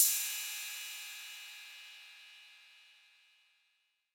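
No technical faults can be heard anywhere in this audio. Nothing in it points to a problem with how the sound was captured, processed or carried.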